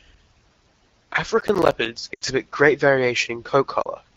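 From 1.41 to 1.86 s, processor overload crackle: the processor kept missing deadlines for buffers of around 10 ms, perhaps ten of them, each leaving a hard-edged silent gap that together make a gritty crackle.

Next come lost AMR speech frames at 2.13 to 2.24 s, about 80 ms (fitting four 20 ms frames), and at 3.81 to 3.86 s, about 40 ms. In each, the decoder repeated the last good settings with falling gain, so the speech drops to near silence within two frames and returns weak for a moment.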